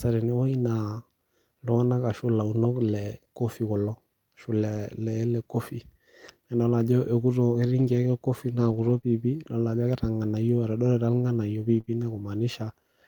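At 4.75 s, one lost packet is rebuilt from error correction: the next packet's low-bitrate copy fills 20 ms, so there's no gap, just a briefly rougher, noisier stretch. Between 7.79 and 11.89 s come scattered short gaps, about three, the longest around 30 ms. Each is patched by continuing the preceding sound and heard as a brief tick or hiccup.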